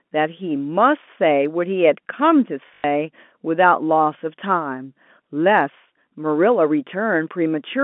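Packet loss with last packet repeated, 2.68 to 2.84 s: 120 ms went missing and was refilled by replaying earlier audio, giving a brief robotic buzz.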